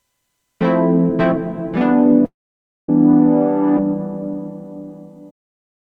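From 2.25 to 2.89 s the sound trails off briefly, then falls silent for 560 ms before resuming with 630 ms of the audio gone. This is likely a long network dropout: no audio arrived, so the receiver stretched the last sound before leaving silence.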